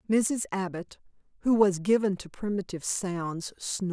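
No technical faults can be heard in this speech recording.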